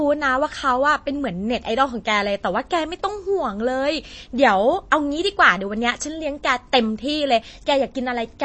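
The speech sounds dull and muffled from start to finish, with nothing above about 8.3 kHz, and a watery, swirling quality runs through it, with metallic chirps on sibilants and softened consonant onsets. These are plainly audible signs of MP3 compression, likely at a low bitrate around 32 kbps: with so few bits, the encoder drops the top band entirely and discards weaker frequency lines, which flicker in and out between frames.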